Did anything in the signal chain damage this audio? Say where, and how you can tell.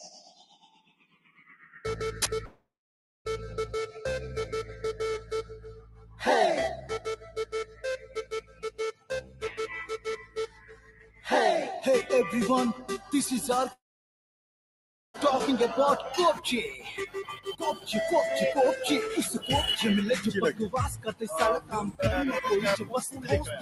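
Yes. At the call-processing stage, a noise suppressor built for speech stays active on this non-speech audio for the whole clip. Sustained material swings in level by around 15 dB while attacks mostly pass. That pumping, following the signal rather than any input level, separates it from a failing gain stage.

The clearest cases of sound cut by the noise suppressor are at 0.3–1.69 s (about 18 dB down), 5.74–6.22 s (about 7 dB), 6.82–11.27 s (about 16 dB), 12.79–13.13 s (about 7 dB), 16.1–17.9 s (about 16 dB), 20.96–22.01 s (about 18 dB) and from 22.77 s to the end (about 14 dB). Held tones and decays sink or are truncated, unlike fades, which would affect transients too.

At 2.45–3.27 s and 13.73–15.16 s, the sound is extended as a fading continuation and then goes silent for about 0.6 s and 1.4 s. It resumes further along, with material missing. The likely cause is a long network dropout. 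A local mute would not fill in the gap, and it would not skip content.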